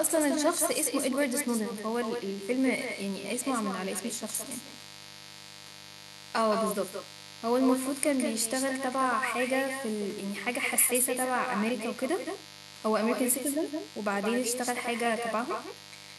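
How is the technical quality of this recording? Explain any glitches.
Two faults run through the whole recording, so its technical quality is poor from start to finish.

The first is a mains buzz: a steady, raspy drone sits under the speech, roughly 20 dB below it, with a harsh edge rather than a smooth hum. It is built on 50 Hz, and sharp switching spikes from a dimmer, a rectifier or an unshielded cable enter twice per mains cycle. Those spikes spread energy across many harmonics of 50 Hz, reaching well into the kilohertz range, which gives the buzz its grainy bite.

The second is echo with no canceller: every phrase is trailed by a fainter, thinner copy of itself, about 7 dB quieter and arriving around 150 ms later. The far end is playing the call through a loudspeaker, its microphone picks that sound back up, and nothing on that side removes it before sending it back. The returned copy therefore shadows the talker continuously, making the speech sound doubled.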